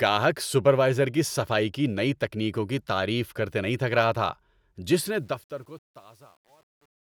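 Right after "تھک رہا تھا جس", at 5.06 s, the fade-out starts to show truncation distortion on a fade, lasting to 7.17 s. As the speech level sinks the processing seems to keep too few bits with no dither, which fits roughly 9-bit resolution. From about 5.46 s to the end, the waveform collapses into coarse steps, so the tail turns gritty.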